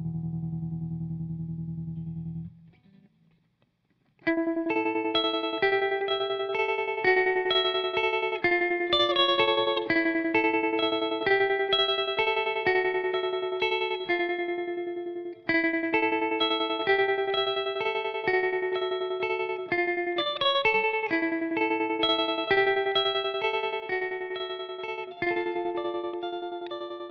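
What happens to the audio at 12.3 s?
Nothing goes wrong at 12.3 s; the audio plays through that moment intact, with no dropout, click or other fault to be heard.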